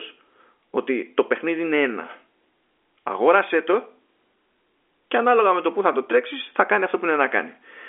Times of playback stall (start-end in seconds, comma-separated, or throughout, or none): none